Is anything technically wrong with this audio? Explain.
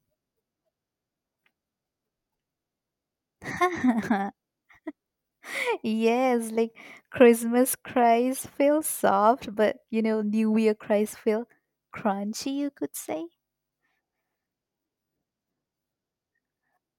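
No, I can't hear any technical problem here.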